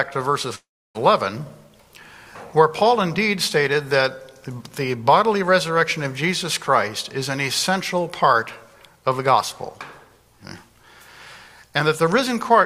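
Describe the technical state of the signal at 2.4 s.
The signal at 2.4 s is intact, with no fault to be heard at that point.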